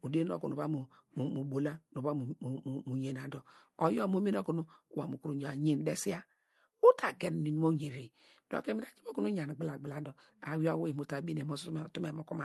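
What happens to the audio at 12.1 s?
Nothing goes wrong at 12.1 s; the speech passes through intact, with only the ordinary coding character of the call path.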